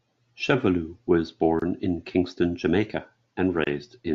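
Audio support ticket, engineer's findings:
Gap at a join of encoded pieces, speech dropping out in a gap of about 25 ms at 1.60 s and again at 3.64 s, edges smeared. Looks like separately encoded chunks concatenated untrimmed, so encoder start delay plus last-frame padding stay in. Picks up where it stopped.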